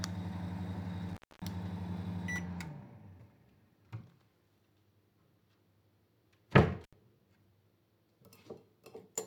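Intermittent contact occurs twice, first from 1.09 to 1.42 s and again from 6.84 to 6.93 s. A loose plug or cable connection briefly opens, so the signal path breaks and the sound drops out, for about 250 ms the first time and about 75 ms the second. Each gap is bracketed by crackle as the contact scrapes open and closed, and faint hiss remains while the line is broken.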